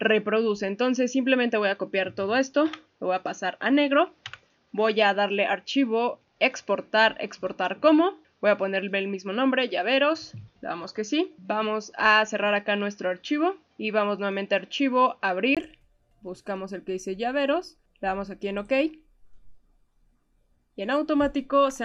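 From the start until 15.57 s the audio is dull and boxy, with nothing above 6.8 kHz, and then it abruptly opens up after a brief gap of about 20 ms. The likely cause is an input switched to a poorer device partway through capture. A plain low-pass filter would only remove the top end, but here the level also shifts by roughly 5 dB and the background noise floor, sitting far below the signal, changes character at the same instant.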